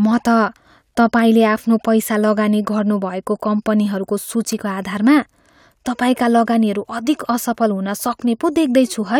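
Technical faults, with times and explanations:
No technical faults heard.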